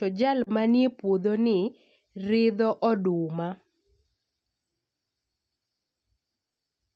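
At 0.43 s a sound in the speech is briefly held too long, with a slight buzz or dip, until 0.50 s. It's a short stall from a late packet: the jitter buffer ran empty, so the receiver stretched about 32 ms of audio, then resumed without losing anything, now 32 ms later.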